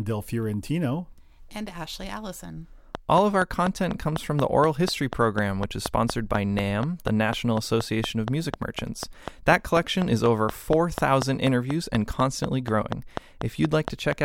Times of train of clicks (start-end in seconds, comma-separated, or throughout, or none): 2.95-14.13